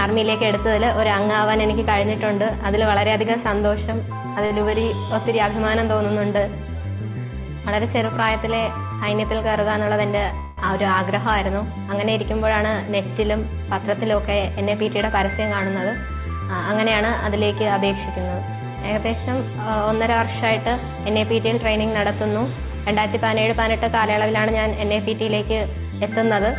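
A short stall from a late packet comes at 4.46 to 4.52 s. The sound there is held about 43 ms too long, with a slight buzz or dip. A packet arrived late and the jitter buffer ran dry. Playback then resumed from the same point, so nothing is lost. Jitter buffer speed-up runs from 9.79 to 10.33 s at 106% speed, trimming roughly 40 ms. It returns from 13.79 to 15.36 s at 108%, trimming roughly 150 ms. Pitch stays the same, but the audio sounds hurried. The receiver is cutting out short pitch-period pieces to shed extra buffered delay. A call audio freeze sits at 10.39 to 10.59 s. The last sound is stretched into a fading buzz or hiss for about 184 ms, with no silence. The audio then picks up where it stopped. This is likely packets stalling in transit and emptying the buffer. Throughout, nothing is heard above 4 kHz, which fits a narrowband G.711 call codec.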